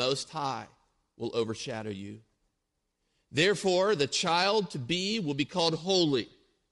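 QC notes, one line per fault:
Throughout: Bluetooth LC3 compression. The speech carries a plainly audible grainy, breathy edge in its upper band, where fine detail is replaced by a noise-like texture that shifts from frame to frame. This is likely the LE Audio transform codec running at a rate that fits about 48 kbps with 7.5 ms frames. At that rate, upper-spectrum detail that cannot be coded is zeroed and filled with synthetic noise.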